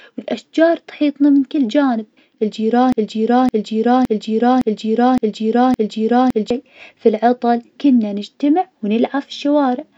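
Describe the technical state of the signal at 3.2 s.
At 3.2 s the speech is caught in a broken-record loop running from 2.92 s to 6.50 s: a 0.56 s fragment repeats back to back six times, most likely because playback stalled and kept resending its last buffer. The audio due in that span is lost, and normal speech resumes with "في العطل كنا نجتمع".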